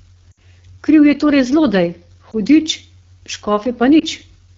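Throughout the speech, the AMR wideband (HD Voice) codec is working at a low rate. The harshness fits its 8.85 kbit/s mode, one of its two lowest. At that rate the vocal tract model is coded coarsely. Voiced sounds turn rough and raspy. The top band, from 6.4 to 7 kHz, is filled with shaped noise, so the highs sound hissy rather than crisp. The damage is plainly audible.

From 0.31 to 0.39 s there are lost AMR speech frames. About 60 ms is missing, which fits three frames. The decoder repeats the last good pitch and vocal tract settings at falling gain. The sound smears, then fades quickly, and comes back weak and rough. Shorter drops follow, from 2.31 to 2.35 s and from 4.00 to 4.03 s. Each fits a single lost 20 ms frame. They are heard as a brief dip or warble.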